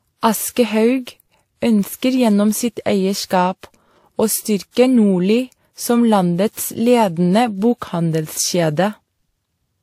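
Throughout the speech, nothing is present above 15.8 kHz. Two kinds of codec artefacts are heard together. This is likely transcoding between lossy codecs, which fits WMA near 96 kbit/s re-encoded as Vorbis near 46 kbit/s.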